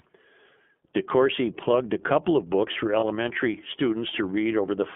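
iLBC codec coding runs through the whole of this speech recording. The sound is confined to a 200 Hz to 3.4 kHz telephone band and has a plainly audible rough, slightly synthetic edge, which fits iLBC's 30 ms frame mode at around 13.33 kbps. Each frame's excitation is coded independently of the one before it. Lost iLBC frames cause a brief dropout from 2.99 to 3.04 s, a gap of about 30 ms that fits a single lost frame. The decoder fills it by repeating the last pitch cycle mixed with noise, producing a short held, faintly buzzy vowel. Because iLBC frames do not depend on each other, the speech recovers cleanly almost immediately afterwards.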